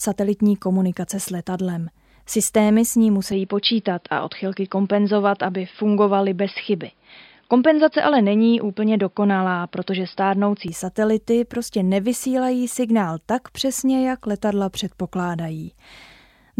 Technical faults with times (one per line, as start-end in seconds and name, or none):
3.32-10.68 input switched to a poorer device